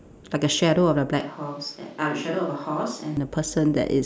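From 1.21 to 3.17 s the speech turns abruptly roomy, hollow and thin, about 5 dB quieter. This is likely a switch to a distant microphone.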